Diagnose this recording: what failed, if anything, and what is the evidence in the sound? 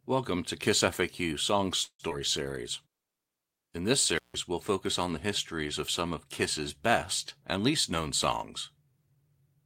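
Call audio freeze, network stage, from 1.83 to 2.01 s: the speech stops and the last sound is carried on as a fading buzz or hiss, reaching silence for about 70 ms. Then it resumes where it left off. That points to a likely jitter-buffer underrun after delayed packets. Nothing is lost, unlike a dropout.

Skip ahead, network or buffer stage, at 2.09 to 2.12 s: the speech jumps forward with only a tiny gap, and roughly 70 ms of audio is gone. The two sides are spliced almost directly. This is the opposite of the freeze just before, where a gap was inserted and nothing was cut.

Jitter buffer slow-down, buffer stage, from 2.43 to 2.92 s: the speech runs at 92% speed with unchanged pitch, as repeated pitch periods add 50 ms. The sounds come out drawn out. Because pitch holds steady, this isn't tape-style drag.

Intermittent contact, analogue wiring, from 4.16 to 4.36 s, just before "we'll focus on the": the sound cuts out for 156 ms with crackle at both edges and faint hiss inside. 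The crackly edges and residual hiss set it apart from a network freeze, which fades smoothly.

Jitter buffer speed-up, buffer stage, from 7.57 to 8.00 s: the speech is hurried to 114% speed at the same pitch, as roughly 70 ms of pitch periods are trimmed out. It is a gradual compression, with no single audible jump like the skip ahead.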